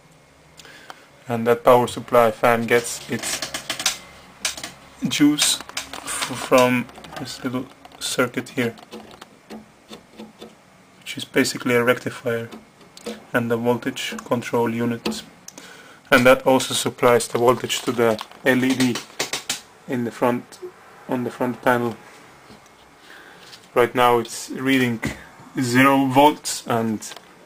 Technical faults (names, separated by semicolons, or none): none